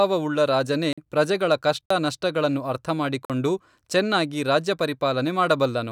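Speech, with three short blocks of digital silence, each about 46 ms, at 0.93 s (just before "ಪ್ರಜೆಗಳ ಕಷ್ಟ ನಷ್ಟಗಳನ್ನು"), 1.86 s (right after "ರಾಜನೇ ಪ್ರಜೆಗಳ ಕಷ್ಟ") and 3.25 s. Each drops hard to silence and back with no fade, which fits a 2048-sample output buffer not being filled in time.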